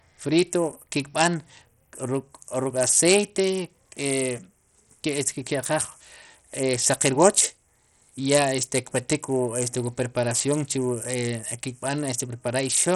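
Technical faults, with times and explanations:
Throughout, Bluetooth SBC compression: the speech sounds gritty and coarse, with the treble flickering and nothing above 16.3 kHz. That's likely a starved SBC link, where the top sub-bands get almost no bits and the rest are crudely quantised, which fits a rate around 64 kbps.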